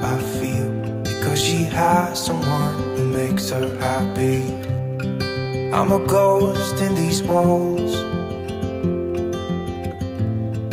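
From 2.07 to 4.79 s there's DECT cordless phone buzz, a thin, steady 100 Hz rasp from nearby bursts getting rectified, sitting well below the main sound.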